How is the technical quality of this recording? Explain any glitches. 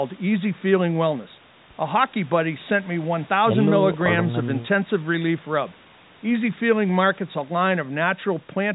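No glitches or faults can be heard here.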